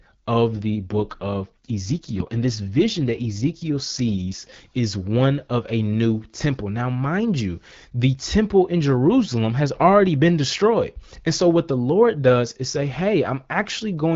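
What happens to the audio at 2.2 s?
At 2.2 s the clip is inside an AMR rate drop running from 0.56 to 4.54 s. The link has pushed the wideband codec down to a much leaner mode, which fits a fall from 12.65 to 6.6 kbit/s, leaving far fewer bits to describe the voice. The band stays the same and nothing drops out, but the speech turns rough, raspy and synthetic until the rate recovers just before "is one of a".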